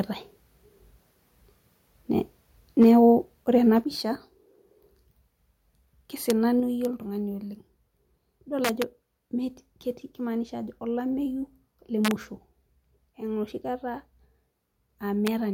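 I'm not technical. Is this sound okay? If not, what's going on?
No. There are three separate problems in this speech recording.

Microphone overload: from 2.81 to 2.98 s the loudest part of the speech has its peaks flattened, which gives it a harsh, crackly edge. The likely cause is that the microphone was set too loud, so the tops of the waveform were cut off.

Microphone volume stepped down: at 2.83, 3.84 and 6.6 s the whole sound, voice and background together, suddenly gets quieter in one step. This is likely the call software turning the microphone down after detecting that it was too loud.

Integer overflow: sharp, violent cracks occur at 6.30, 6.85, 8.65 to 8.82, 12.05 to 12.11 (right after "kimaanisha ajo olameyu le") and 15.27 s. Here the loudest moments went past the largest number the system can store and flipped to the opposite extreme, which sounds far harsher than ordinary overload.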